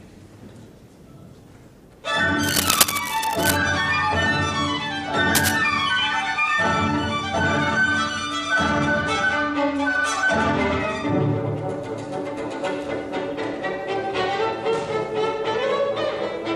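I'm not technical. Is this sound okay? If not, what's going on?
No. Cable scratch noise appears from 2.42 to 3.57 s and again from 5.34 to 5.56 s: bursts of scratchy rustling, roughly as loud as the sound itself. It's likely a worn cable or connector being moved, so its electrical contact flickered.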